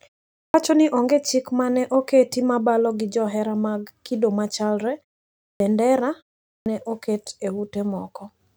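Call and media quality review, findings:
Clipped start after a pause: onsets swallowed at 0.35–0.54 s (before "ni onge chik ma"), 5.43–5.60 s (after "johera mag kido machalre"), 6.48–6.66 s (before "ne oket e"). Roughly 170–190 ms lost each time, after pauses of 0.34–0.47 s. The output device sleeps in silence and is slow to wake, so sound begins abruptly. This differs from muted pauses, which drop only background and lose no sound.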